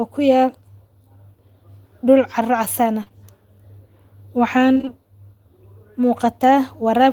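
From 3.03 to 3.08 s and again from 3.08 to 3.12 s, short concealed packet loss occurs twice in a row. The decoder received each stretch late, so it extended the preceding sound and blended back. The result is a brief smear.

Between 4.74 and 4.89 s, repeated packet loss (robotic sound) sets in. Several short gaps, none longer than about 19 ms, are each patched before the next arrives, so roughly half this span is synthetic. It comes across as choppy and robotic.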